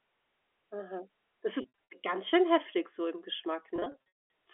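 From 1.62 to 1.78 s, just before "ganz schön heftig so", packet loss with pitch repetition fills short gaps by looping the last pitch period, so the sound briefly holds with a buzzy sheen. From 3.76 to 4.26 s, after "schön heftig so im", a 220 ms run outlasts the fade and sinks into silence before cross-fading back. Plain dropouts cut straight to silence or click instead. All of this sits within the 300–3400 Hz telephone band.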